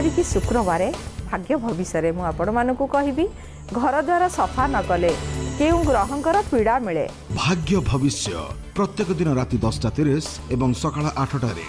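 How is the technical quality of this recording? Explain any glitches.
No glitches or technical faults can be heard here.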